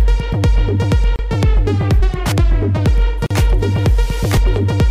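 The audio has two gaps at a join of encoded pieces: a 30 ms silence from 1.16 to 1.19 s and a 42 ms silence from 3.26 to 3.31 s. Each segment was encoded separately and joined untrimmed, so the encoder's start delay and final-frame padding remain. The waveform shows a flat dropout with slightly smeared edges, and the spectrogram shows a thin vertical blank band before the sound resumes where it stopped. At 4.37 s there is an abrupt jump in the sound and no silence, most likely a dropped buffer (overrun) that lost about 20 ms of samples. The waveform shows a sudden discontinuity, and the spectrogram shows a brief broadband vertical line.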